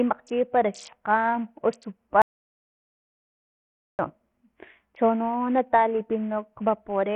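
A speech recording carries two faults. Throughout, the treble is thin and unsteady, with high frequencies flickering in and out and a gritty grain clinging to the sound. This is likely Bluetooth SBC compression pushed hard, since the damage fits a small bit pool at about 48 kbps. The few coarse sub-bands leave the upper ones with almost no bits and quantise the rest roughly, so aliasing products appear. On a spectrogram the upper bands break into patchy, blocky fragments that switch on and off, and the top of the band is often bare. Then from 2.22 s to 3.99 s there is an audio dropout to silence lasting about 1.77 s. The sound stops abruptly mid-flow and returns just as suddenly, and the gap holds no room tone at all, which points to the input being lost while silence kept being written. On a waveform this is a near-flat line, and on a spectrogram it is a dark column with hard edges.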